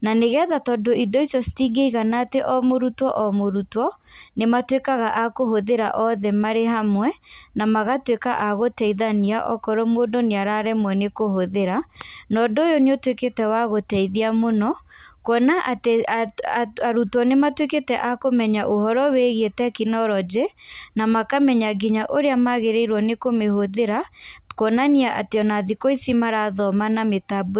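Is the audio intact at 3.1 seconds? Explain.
Yes, the speech at 3.1 seconds is intact, with no dropout, glitch or other fault there beyond the narrowband call-codec character heard throughout, with nothing above 4 kHz.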